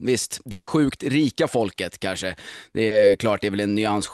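From 0.51 to 0.69 s the speech gives way to a continued, fading smear of the preceding sound for about 160 ms, then resumes further on with that stretch missing, likely a long network dropout. At 2.87 to 2.93 s a short concealed packet loss replaces 40 ms with an extrapolated continuation of the previous sound, heard as a brief smear before the real audio blends back in.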